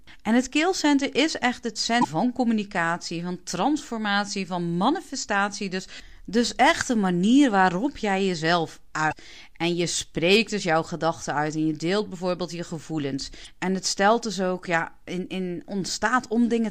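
Damaged data in a compressed stream causes three brief glitches in the speech, at 2.01–2.05 s, 9.09–9.13 s and 13.43–13.47 s. In each 40–42 ms, the decoder misreads corrupt frames before resyncing, heard as a chirp, squawk, click or short hole.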